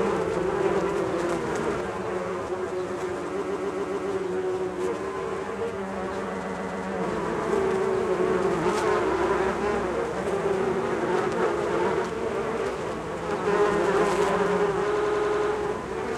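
This everyday sound recording turns hollow and phasey from 1.81 to 7.04 s, with fixed notches starting around 50 Hz. That is channel delay (comb filtering): one channel runs about 10 ms late, and summing to mono cancels their common content at evenly spaced frequencies. The audio also stutters in three places, where repeated frames replay the same stretch. From 3.40 to 4.10 s a 139.3 ms block plays five extra times, adding 696.6 ms. From 6.42 to 6.84 s the same length block repeats three extra times, adding 418 ms. From 14.94 to 15.50 s a 92.9 ms block repeats six extra times, adding 557.3 ms.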